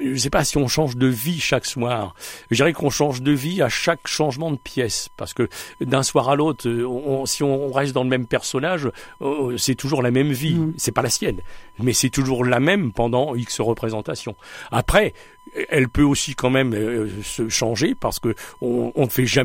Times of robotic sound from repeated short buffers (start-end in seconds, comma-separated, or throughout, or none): none